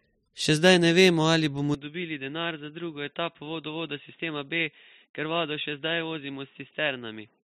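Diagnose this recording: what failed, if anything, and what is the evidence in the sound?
Input switched to a poorer device at 1.74 s, right after "ne vemo ali bomo", and it stays that way to the end. From that point the speech loses everything above 3.8 kHz and turns dull and boxy. The level falls by roughly 10 dB, and a different background noise appears about 45 dB below the signal, with no gap at the changeover. The failure sits at the driver's input-device selection, likely a fallback to a headset's narrowband call profile.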